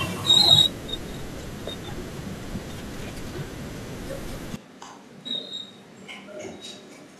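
Switch to a distant microphone at 4.56 s, lasting to the end of this speech: abruptly roomy, about 10 dB quieter, likely from losing the close microphone.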